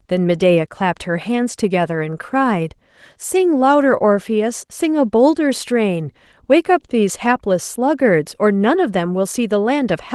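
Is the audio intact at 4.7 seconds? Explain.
Yes, at 4.7 seconds the speech is intact, with nothing there beyond the light coloring of the Opus voice compression running at 20 kbps across the full band.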